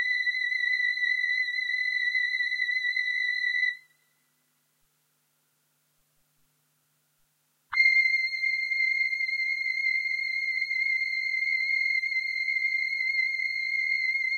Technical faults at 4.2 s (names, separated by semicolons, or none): none